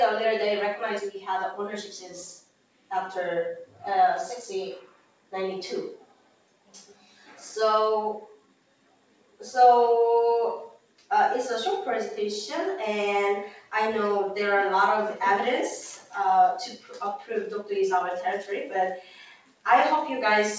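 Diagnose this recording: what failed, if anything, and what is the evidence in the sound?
The failure is in call processing: a noise suppressor tuned for speech was left on while the audio is music or other non-speech sound. It treats sustained tones, ambience and reverberant tails as background noise and keeps pulling them down while onsets pass, so the level swings by around 10 dB throughout and the sound pumps and thins. The band stops at 8 kHz, which fits the G.722 call codec at 64 kbps.

Sound cut by the noise suppressor shows up as distinct dips where held or decaying material sinks under the suppressor's gain reduction: 1.83–2.91 s, 3.66–3.82 s, 4.82–5.33 s, 5.97–7.36 s, 8.33–9.4 s, 10.75–11.1 s, 16.77–17.3 s and 19.01–19.65 s. Most reach about 12 dB down. The shallowest is about 9 dB at 3.66 s, and the one at 16.77 s is about 10 dB. Tails are truncated while sharper attacks survive, which points to misclassification rather than a level or transmission fault.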